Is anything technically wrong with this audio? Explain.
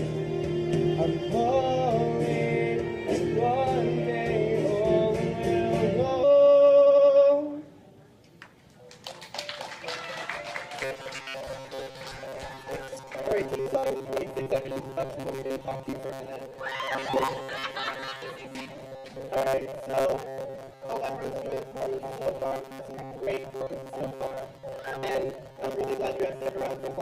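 Yes, three things. At 6.23 s there's a skip ahead: about a second of audio gets dropped and playback jumps straight forward, the two sides butting together with no gap.

Right after, from 6.28 to 8.04 s, the jitter buffer speed-up kicks in, trimming pitch-period slices to shed around 0.4 s. It runs about 123% fast, hurried but same pitch.

From 10.81 s to the end it's a robotic sound from repeated short buffers: a rigid metallic buzz at 134 Hz. The likely cause is roughly half the time filled by repeating a piece about 7.5 ms long.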